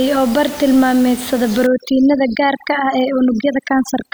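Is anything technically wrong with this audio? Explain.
Yes. Overdone noise removal affects this speech from about 1.67 s to the end of the clip. A noise reduction stage was set too aggressively. Each frequency band that falls close to its noise estimate is pulled far down or switched off. Quieter parts of the voice sit near that level, so they vanish along with the noise. The room noise, about 18 dB below the speech before this point, drops and breaks up into twinkling specks.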